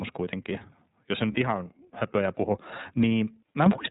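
Throughout, the speech carries the iLBC codec's narrowband character. Nothing appears above 4 kHz, so a spectrogram shows a hard ceiling with empty space above it. The voice sounds clear but rough and slightly synthetic, and the damage is plainly audible. The framing fits iLBC's 30 ms mode at about 13.3 kbps.

At 1.32 s, between "kuitenkin jos se" and "ihan höpöjä puhu", lost iLBC frames leave a gap of about 30 ms, which fits a single dropped frame. The decoder fills it by repeating the last pitch cycle mixed with noise, heard as a brief held, buzzy vowel. On the waveform this shows as a short run of similar, repeated periodic cycles. Because each frame decodes independently, normal speech returns immediately afterward.

At 3.66 s, the microphone volume is stepped up by about 8 dB in a single jump. The call software judged the input too quiet and raised the device gain. Voice and background get louder together, and the waveform envelope widens abruptly at that point.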